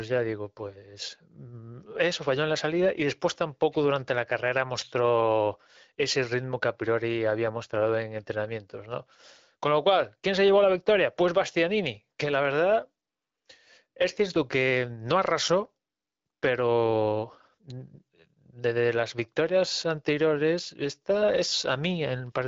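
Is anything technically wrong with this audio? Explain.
No, nothing is technically wrong here: the speech has come through AMR wideband (HD Voice) coding at 12.65 kbit/s, which leaves only light coding traces and a top end that stops short of about 7.5 kHz, as that path normally does.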